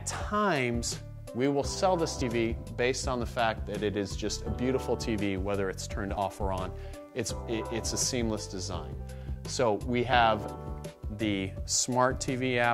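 At 2.22, 6.17 and 10.13 s the audio skips forward by roughly 40 ms with no silence. The regular four-second spacing points to a likely case of audio missing between chunks.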